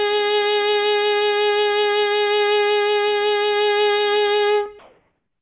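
Comfort noise in place of the background, from 4.79 to 5.41 s: as the music drops to a background about 52 dB below its loud parts, the final 0.63 s becomes steady, featureless hiss, shifted in level by about 4 dB. This is likely discontinuous transmission, with the receiver synthesising noise; throughout, the 4 kHz ceiling of the G.711 call path stays audible.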